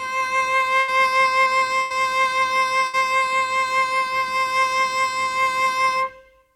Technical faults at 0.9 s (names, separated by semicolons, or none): burst of packet loss